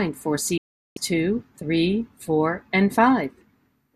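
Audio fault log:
0.58–0.97 s, digital broadcast dropout: the speech snaps to silence with a fade of about 3 ms, leaving a hole of about 384 ms before it resumes on "two three four and". The receiver muted while frames were missing or corrupt, so that stretch is lost.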